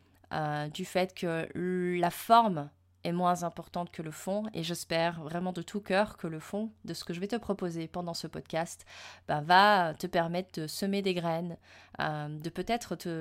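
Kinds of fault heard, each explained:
No faults can be heard anywhere in this recording.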